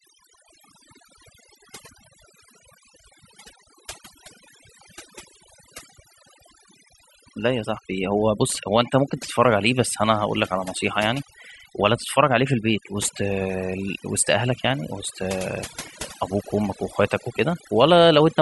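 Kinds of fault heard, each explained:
Overdone noise removal: a noise reduction stage was set far too aggressively for this speech, so every frequency band sitting close to its noise estimate gets pulled down hard or switched off entirely, and the softer components of the voice fall below that threshold along with the noise. Throughout the clip the background drops away and breaks up into twinkling, chirpy specks.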